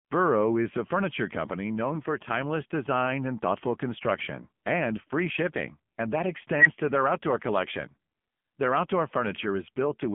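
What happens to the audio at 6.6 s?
A recursive filter became an unstable filter at 6.55 s: bad coefficients let its output feed back and grow without limit. A tone of roughly 2 kHz swells over about 103 ms into a loud, clipped squeal, then the overflow cuts the sound to silence for about 5 ms before the filter resets at 6.66 s.

Underneath, the speech is carried by the AMR narrowband mobile codec at 6.7 kbps. At that low bitrate the vocal-tract model is starved of pulses, so the voice sounds heavily buzzy and synthetic, and nothing above 3.6 kHz survives.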